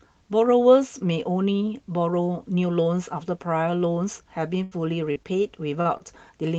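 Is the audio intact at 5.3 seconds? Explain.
No. A short stall from a late packet occurs at 5.23 to 5.28 s. A packet arrived late and the jitter buffer ran dry, so the receiver stretched the last sound by 17 ms and then resumed. Nothing is lost, but the sound hangs briefly with a slight buzz or dip.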